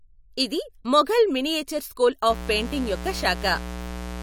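From 2.30 s to the end of the speech, a mains buzz comes in. Sharp switching spikes, twice per 60 Hz cycle, leak into the signal path. Their harmonics reach into the kilohertz range. It sounds like a steady, raspy buzz, roughly 10 dB below the speech.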